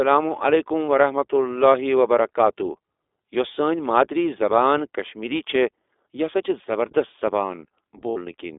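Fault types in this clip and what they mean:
iLBC codec: The speech sounds band-limited and thin, roughly 300 Hz to 3.6 kHz, with a plainly audible rough, synthetic edge. The narrowband VoIP codec codes each 20 ms frame independently at a rate fitting 15.2 kbps, discarding everything above the line band.
Lost iLBC frames: At 0.87 s a single 20 ms gap is bridged by a brief held buzzy tone, and from 8.10 to 8.18 s a longer 60 ms stretch becomes a breathy, fading held vowel. The decoder repeats the last pitch cycle with noise, then recovers almost immediately.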